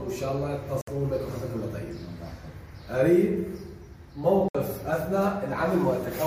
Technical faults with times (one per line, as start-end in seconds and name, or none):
0.81-0.87 Bluetooth dropout
4.48-4.55 Bluetooth dropout